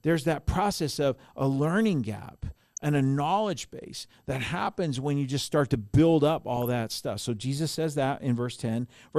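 MP2 compression is audible across the whole speech clip. The sound is dull and carries a gurgling, granular roughness, likely from MPEG Layer II coding at a low rate, which fits something around 80 kbps. With so few bits to share among its 32 sub-bands, the encoder drops upper bands entirely and quantises the rest coarsely, so the top end thins out and flickers while the remaining bands turn grainy.

DAB burbling appears from 2.51 to 2.84 s and again, more briefly, from 6.57 to 6.72 s. Bit errors from weak reception have slipped past error correction into the MP2 data, corrupting samples and scale factors so individual sub-bands jump in level frame by frame. The result is blips of noise in single sub-bands laid over the speech. The first burst is longer and hits 16 frames against 8, with an error rate of roughly 0.4 percent against about 0.2 percent in the second.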